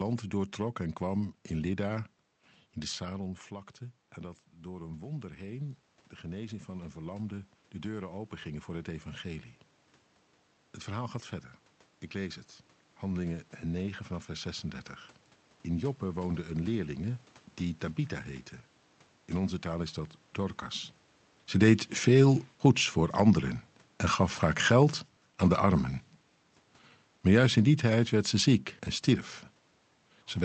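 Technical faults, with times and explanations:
4.9 to 9.52 s, automatic gain rising: after the voice drops by about 11 dB, around 3 s when the talker moves back, the gain control slowly adds about 7 dB to compensate, so the voice and the room noise swell up together over those few seconds.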